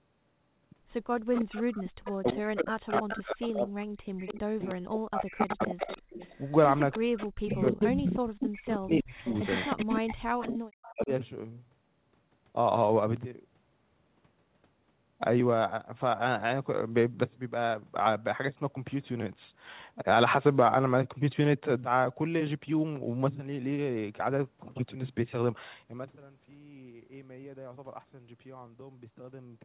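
From 1.16 to 2.33 s a faint delayed copy of the speech trails the original by about 0.31 s, likely an echo leak from a loudspeaker the echo canceller failed to clear. It sits about 15 dB down and shows on a spectrogram as repeated harmonic traces offset in time. It recurs at 2.94–3.49 s (about 5 dB down), 4.18–4.75 s (about 15 dB down) and 5.39–10.9 s (about 5 dB down, nearly as loud as the speech).

Overlapping this, from 2.2 to 6.22 s and again from 6.95 to 11.11 s, the talker's speech is likely suppressed in double talk. The canceller mistakes it for echo and pulls it down in chunks, by roughly 40 dB at worst, across about three seconds of each span. The waveform shows abrupt holes in the envelope.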